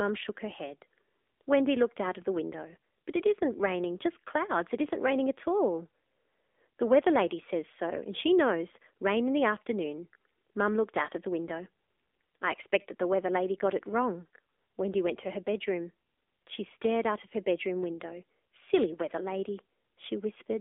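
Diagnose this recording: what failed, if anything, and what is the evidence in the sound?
Codec stage: AMR narrowband mobile codec throughout. The speech is confined to a 300 Hz to 3.6 kHz line band, and the voice is plainly buzzy and synthetic, from the codec's frame-by-frame vocal-tract model at a low mode, which fits about 7.4 kbps.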